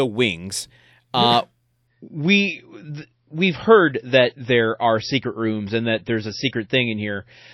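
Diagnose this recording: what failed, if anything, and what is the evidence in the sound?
The network stage failed: the connection slowed and the adaptive stream switched down to a lower bitrate, which fits a drop from a 128 kbit/s MP3 rendition to one near 26 kbit/s. From 1.87 s, right after "wings uh", to the end of the speech, the sound abruptly loses its top end, with nothing above 5.8 kHz, and turns thinner and more artefact-laden. There is no gap at the switch, only the sudden quality step.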